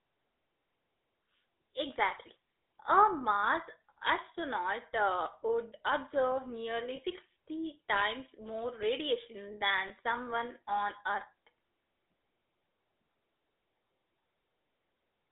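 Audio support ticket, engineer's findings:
GSM full-rate codec throughout: buzzy, gravelly speech, sound confined to 300 Hz–3.7 kHz. Spectrogram shows hard band edges and coarse, pulse-driven harmonics. Fits 13 kbps GSM full rate.

Lost GSM frames at 6.96–6.99 s after "astronaut uh would observe" and at 9.88–9.91 s after "times more radiation", before "someone on": brief metallic ring, one 20 ms frame concealed by repeating the prior frame. Spectrogram shows a smeared, static patch.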